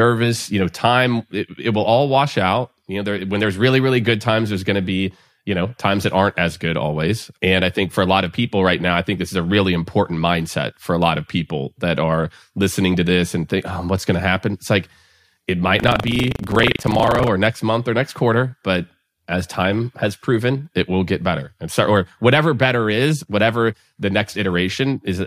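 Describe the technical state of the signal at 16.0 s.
At 16.0 s the signal is in a stretch of buffer tearing running from 15.76 to 17.28 s, between "like it" and "next month or next". The writing side and the playback hardware have drifted so they cross inside each buffer, leaving roughly a fifth of every period filled with audio around 70 ms stale, hard-spliced on both edges. Repeating every cycle, those joins make a robotic 25 Hz buzz over the speech, which fits a buffer period of about 40 ms.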